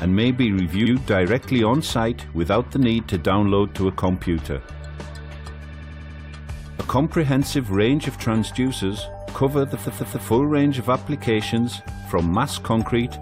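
Repeated frames at 0.85 s (a 69.7 ms block replayed once), 5.72 s (92.9 ms, six extra plays) and 9.83 s (139.3 ms, three extra plays): the same compressed blocks were decoded again, causing stutters that lengthen the audio.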